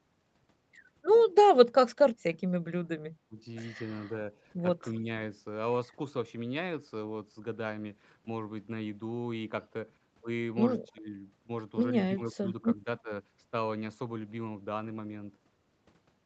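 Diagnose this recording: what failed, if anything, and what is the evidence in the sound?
The speech dips at 3.29–3.37, 5.0–5.06, 10.93–11.14, 12.18–12.45 and 12.76–13.11 s, by roughly 5 to 20 dB. That's call processing, likely speech suppressed in double talk: the echo canceller mistook this talker for far-end echo and ducked everything.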